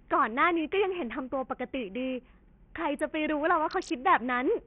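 Bluetooth SBC compression runs through the whole clip: the speech has thin, flickering treble and a gritty, aliased noise riding on it. The likely cause is SBC starving its upper sub-bands at a tiny bit pool, which fits a bitrate near 48 kbps.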